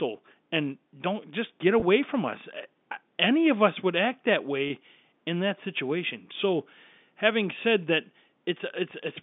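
Two brief, buzzy held moments at 1.80–1.82 s and 4.68–4.70 s are packet loss with pitch repetition: the last pitch period was repeated to fill each 20 ms gap.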